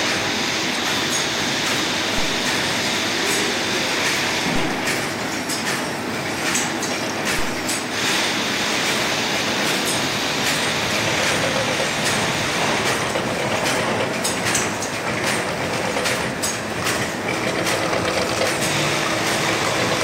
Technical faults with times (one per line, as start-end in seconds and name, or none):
7.39 DC step